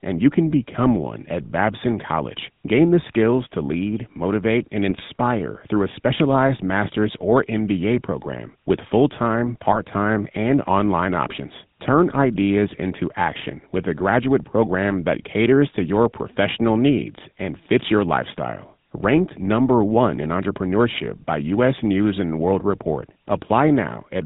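Speech coded with the GSM full-rate codec, which fits a 13 kbps link, is band-limited to 4 kHz with a plainly audible buzzy, gravelly roughness from its coarse pulse excitation. GSM bit errors corrupted the decoder's filter, pitch or gain values from 4.89 to 5.01 s and from 9.70 to 9.84 s, breaking the sound into squawks, pops or gargling.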